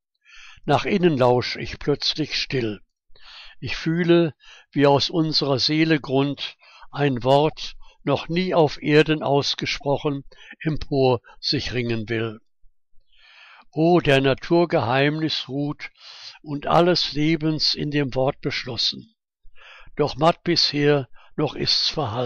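At 7.51 to 7.53 s and again at 9.80 to 9.83 s, a corrupt frame was decoded. Bit errors inside the compressed data went unnoticed, and the decoder rendered the damaged frame with misread gains and codes, putting energy at the wrong frequencies. Each event is a short chirp, squeak, blip or burst of noise lasting about 20 ms and peaking around -35 dBFS. The first points to a single bad frame, the second to a small cluster.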